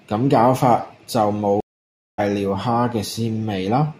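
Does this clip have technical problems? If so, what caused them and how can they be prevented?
Yes. At 1.60 s the speech cuts to silence for about 0.58 s, then resumes at 2.20 s roughly half a second further on. This is a stream reconnect: the connection dropped and a fresh decoder restarted mid-stream. Larger client buffering and resuming from the last received position would prevent it.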